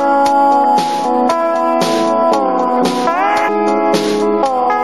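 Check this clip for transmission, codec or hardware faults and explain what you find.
One fault is audible, at 3.47 s: the sound jumps abruptly forward with a brief blip, most likely a stream segment skipped. When one segment of a segmented stream fails to load, the player moves straight on to the next, so a stretch of the programme is simply missing and the two sides are butted together. On a waveform this shows as a sudden discontinuity in the envelope at 3.47 s. On a spectrogram, a thin vertical broadband line marks the splice, with the textures on either side not matching.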